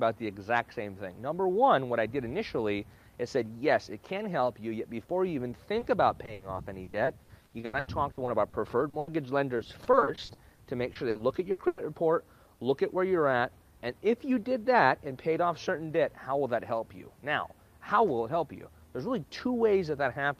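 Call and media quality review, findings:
Brief smear/wobble, 5.79–5.83 s. Short concealed packet loss: about 20 ms of audio missed the decoder deadline. The receiver's loss concealment continued the preceding sound into the hole, then blended back into real audio. Probable component: network path feeding the jitter buffer.

Choppy, robotic sound with pieces missing, 6.25–9.09 s. Repeated packet loss (robotic sound): 16 gaps, 760 ms concealed (27% of span), longest gap 80 ms. Each hole is patched by extending the last sound, and the next follows soon after. Network path / jitter buffer.

Same choppy, robotic character, 9.57–11.79 s. Repeated packet loss: 15 gaps, 520 ms concealed (23% of span), longest gap 100 ms. Back-to-back concealment leaves fragmented audio. Network path / jitter buffer.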